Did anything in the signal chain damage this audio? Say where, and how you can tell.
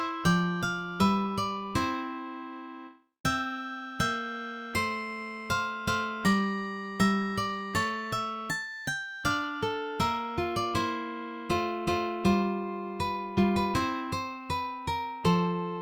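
No, nothing in the chain audibly damaged this audio.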